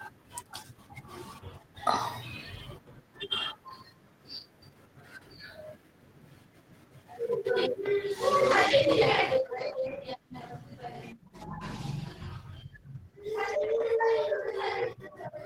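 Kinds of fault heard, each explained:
call bitrate drop: from 8.41 s to the end, the encoder rate falls from 32 to 16 kbps, so the speech is coded more coarsely and sounds rougher.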